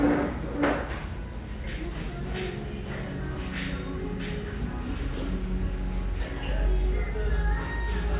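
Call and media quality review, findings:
Nothing stood out on listening to the audio, so there are no findings to raise.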